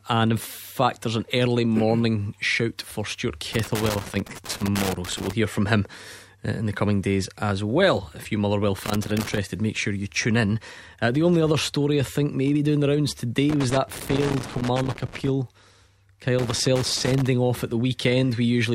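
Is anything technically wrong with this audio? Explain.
Yes. The speech carries loose connector crackle in four bursts: 3.53 to 5.33 s, 8.85 to 9.38 s, 13.49 to 15.29 s, and 16.39 to 17.29 s. A worn or dirty contact in the signal path is shifting. It keeps connecting and disconnecting, so the audio is chopped into fragments. Any DC on the line turns each break into a pop. The result is an irregular scratching crackle laid over the speech during each burst.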